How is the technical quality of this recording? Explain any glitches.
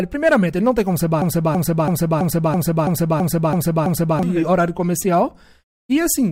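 The recording has one serious glitch. From 1.22 to 4.23 s, right after "não tem como ser", a broken-record loop repeats the same 0.33 s fragment nine times back to back. Each repeat is identical and undecaying, which distinguishes it from echo. The cause is likely a stalled player resending its last buffer, and the speech meant for those three seconds is lost.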